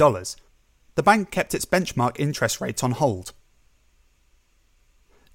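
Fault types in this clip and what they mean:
Repeated buffer: the playback side ran dry for an instant and replayed its last chunk, so a tiny slice of the speech sounds twice with a hard seam at the join. It happens at 0.30 s and at 2.75 s, between "kept its benchmark interest" and "on hold". Each repeat lasts about 12 ms, which fits a 512-sample buffer, so it comes across as a quick click rather than a stutter, and no audio seems to go missing.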